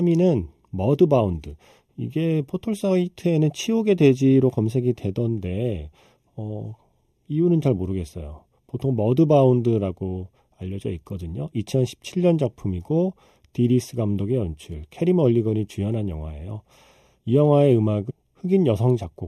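Speech runs hollow and phasey throughout because of channel delay (comb filtering): one channel lags the other by roughly 0.3 ms, so summing to mono cancels energy near 1.5 kHz and at evenly spaced points above it, seen on a spectrogram as fixed horizontal notch bands. At 18.09–18.11 s, damaged data in a compressed stream makes the decoder misread frames, producing a brief glitch that appears as a narrow vertical smear and an abrupt waveform discontinuity.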